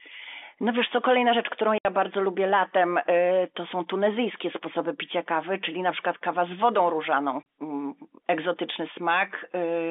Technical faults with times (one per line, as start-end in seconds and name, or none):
1.78-1.85 packet loss filled with silence
7.43-7.45 packet loss filled with silence